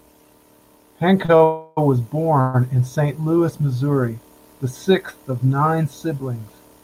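At 1.25 to 1.30 s and again at 1.36 to 1.42 s the speech hits a short stall from a late packet. Each time, the receiver's buffer ran dry and it held the last sound for about 30 ms until the data turned up, then carried on from the same point. The result is a briefly prolonged sound with a faint buzz or dip. These stalls are shorter and tighter than a freeze, and no speech is dropped.

From 1.44 to 1.79 s, and again from 2.41 to 2.56 s, the audio goes into a call audio freeze, likely caused by packets held up in transit emptying the jitter buffer. Instead of a held sound, the stalled audio smears into a fading buzz or hiss, about 330 ms long the first time and about 130 ms the second. Neither wait is long enough to reach silence. Once delivery resumes, the speech picks up where it left off, so the gaps add time rather than losing content.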